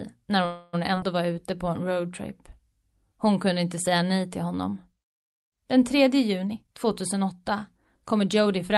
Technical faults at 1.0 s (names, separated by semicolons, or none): skip ahead